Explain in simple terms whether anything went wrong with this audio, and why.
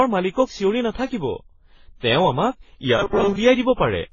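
The speech was likely saved in a lossy compressed format and then converted into other lossy formats, a fault called transcoding between lossy codecs. Each step removes detail and adds its own damage, so the whole clip sounds muffled, with nothing above about 7 kHz, and has layered, smeared artefacts.

From 2.98 to 3.36 seconds, new audio likely arrived too slowly, and the playback filled the gap by repeating a tiny slice, causing robotic sound from repeated short buffers. Most of that stretch becomes a stiff, metallic 200 Hz buzz, which fits a slice about 5 ms long.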